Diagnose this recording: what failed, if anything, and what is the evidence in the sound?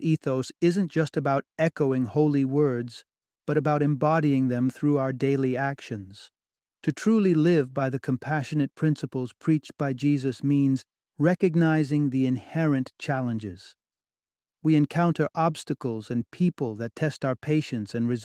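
Nothing stood out on listening to this speech recording that would point to a failure at any stage.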